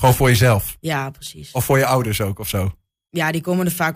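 Just after "voor jezelf", from 0.76 to 1.27 s, four CD scratch ticks, each under a millisecond, recur once per disc revolution, showing as thin vertical broadband spectrogram lines.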